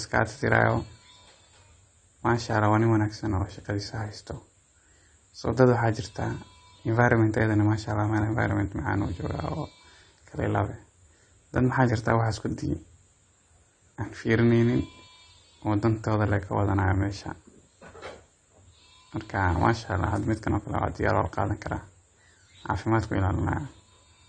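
Throughout the speech, the top end sounds dulled and smeared, with warbling, fizzy sibilants. The likely cause is AAC compression at a low bitrate, consistent with roughly 32 kbps AAC-LC. On a spectrogram the highs stop at a lowered cut-off, with patchy gaps beneath.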